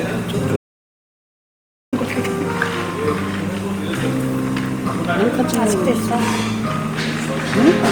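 A recording of sounds with an audio dropout to silence from 0.56 to 1.93 s. About 1.36 s vanishes into silence with no room tone left, likely from a lost input.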